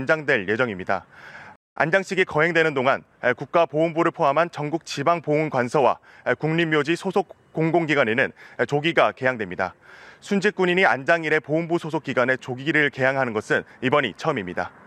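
The player's buffer ran dry at 1.56 s, causing a rebuffering stall: the audio drops to silence for about 0.21 s, then resumes exactly where it stopped, with nothing lost.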